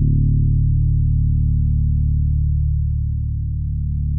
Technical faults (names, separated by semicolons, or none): none